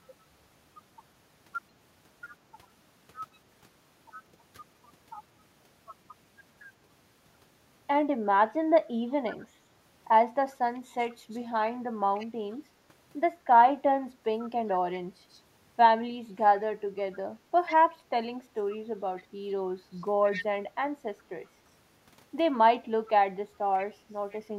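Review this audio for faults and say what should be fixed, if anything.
Echo leak at 3.34–3.38, 11.03–11.38, 12.15–12.56, 14.47–15.39, 17.66–17.76, 18.71–19.24, 20.23–20.45 and 23.8–24.4 s: a faint-to-fairly-loud copy of the speech trails it by 136 ms, likely from a far-end loudspeaker feeding a microphone whose echo canceller let some through. Unlike room reverberation, it is one distinct repeat at a fixed delay, not a smooth decaying tail. To prevent it, tune or enable the far end's echo cancellation, or have that side use a headset.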